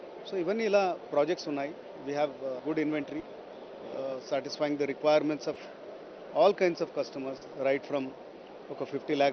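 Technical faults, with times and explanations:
3.19–3.25 s, 5.53–5.57 s, 7.37–7.43 s: short concealed packet loss. About 40, 20 and 40 ms never arrived, so the decoder extended the preceding sound and crossfaded back, giving brief smears. On a spectrogram these appear as stretched, smoothed patches below the codec's 8 kHz ceiling.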